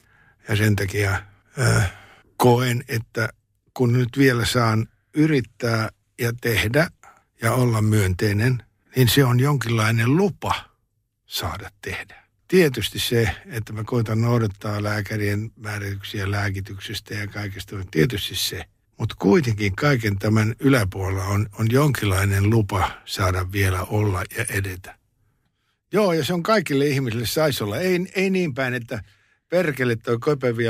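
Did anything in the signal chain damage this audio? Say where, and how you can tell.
No, nothing in the signal chain has audibly damaged this speech recording. Listening closely, none of the stages from capture to playback leaves a trace that can be picked out.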